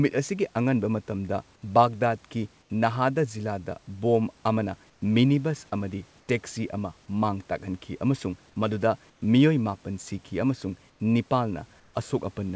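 Six short gaps in the speech lose their real background to comfort noise: 2.62 to 2.70 s (just before "ꯅꯥꯍꯗꯥ ꯖꯤꯂꯥꯗ ꯕꯣꯝ ꯑꯃꯅ"), 4.90 to 5.02 s (just before "ꯃꯤꯅꯤꯕꯁ ꯑꯃꯗꯤ ꯇꯦꯛꯁꯤ"), 6.20 to 6.28 s, 9.10 to 9.22 s (right after "ꯑꯃꯁꯨꯡ ꯃꯗꯨꯗ"), 10.90 to 11.00 s and 11.80 to 11.94 s. Each lasts 80 to 140 ms and sounds flat and featureless, about 3 to 5 dB quieter than the room. The likely cause is discontinuous transmission, with the receiver filling each pause with synthetic noise. The audio is band-limited, with nothing above 8 kHz.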